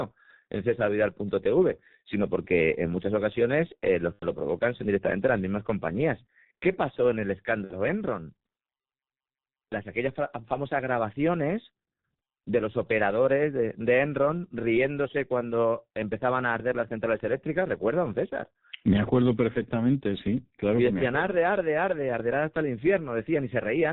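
Throughout, the speech carries heavy G.723.1 codec damage. Nothing above 4 kHz survives, the voice sounds muffled and hoarse, and consonants smear, consistent with a low-rate stream near 6 kbit/s whose 30 ms frames update the vocal model only coarsely.

From 4.13 to 4.26 s, after "muchas ocasiones eh los" and before "lo provocan son directamente", VoIP packet loss concealed by the speech codec stretches the last sound into a buzzy tone or coloured noise that fades. The roughly 90 ms gap fits three missing 30 ms frames. At 7.64 to 7.75 s, after "pasó en el", about 60 ms is bridged the same way, with weakened, distorted sound persisting briefly afterward.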